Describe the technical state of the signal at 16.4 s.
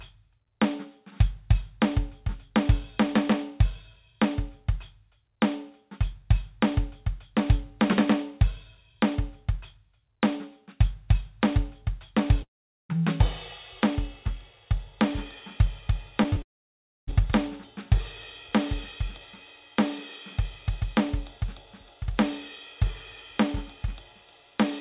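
At 16.4 s the music sits between two faults. Short concealed packet loss hits at 16.30 to 16.34 s and again at 16.34 to 16.38 s. Each time about 20 ms never arrived. The receiver patched the gap by extending the preceding sound, so these moments are brief smears rather than clean music.

A long network dropout follows, from 16.42 to 17.09 s. The audio extends briefly, fades, then goes silent for about 0.63 s. A likely cause is a stall in delivery. The music resumes afterwards with that stretch missing.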